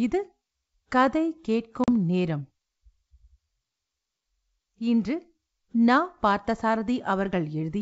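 At 1.84 s the speech drops into a hard-edged silent gap of about 40 ms. This is packet loss on an ADPCM call: roughly a couple of packets went missing and were filled with silence. The gap leaves the decoder's adaptive predictor and step size out of step with the sender's, so the sound coming back is distorted until the decoder settles again, by about 1.90 s. The G.722 wideband coding underneath, at 64 kbit/s, carries speech up to about 7 kHz.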